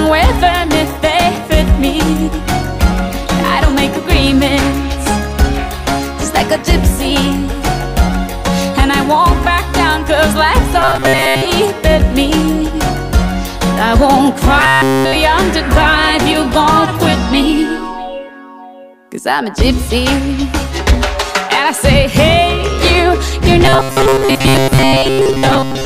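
Three times the audio goes robotic, locking into a rigid, metallic buzz at 133 Hz: 10.82 to 11.46 s, 14.60 to 15.15 s, and from 23.65 s to the end of the clip. This is robotic sound from repeated short buffers, likely from audio arriving too late and a roughly 7.5 ms chunk being looped to fill the gap. Most of the real audio is replaced in the first and last stretches, and essentially all of it in the middle one.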